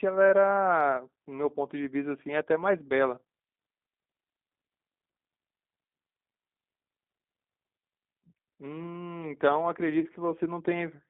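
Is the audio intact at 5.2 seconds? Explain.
No. At 5.2 s, as throughout, G.729 codec damage is plainly audible: the 8 kbit/s model leaves speech within about 200 Hz to 3.7 kHz, rough and synthetic.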